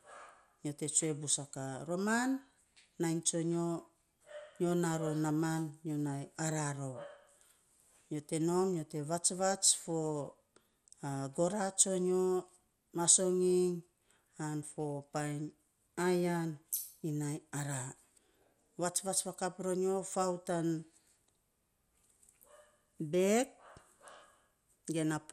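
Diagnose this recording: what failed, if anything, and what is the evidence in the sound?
Across the whole recording the speech sounds dull, with a gurgling, granular grit that stays audible throughout, and nothing is present above about 15.8 kHz. The failure sits at the codec stage, likely MP2 compression starved of bits, which fits a rate around 80 kbps. Layer II divides the spectrum into 32 sub-bands; short of bits, it shuts off the highest bands and coarsely quantises the rest, so bands flicker and leave that grainy residue.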